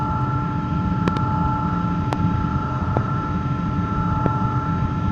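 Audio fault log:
1.08–1.19 s, 2.13–2.15 s, 2.97–2.99 s, 4.26–4.28 s: loud pop. Each is a sharp, thumpy burst standing about 20 dB above the sound (the last nearer 15 dB), with the first being a quick double pop. The likely cause is a sudden voltage step or pulse, from a plug, switch, static or driver glitch, that downstream circuits rounded into a brief thump. Unlike a dropout click, the underlying sound continues uninterrupted beneath each pop.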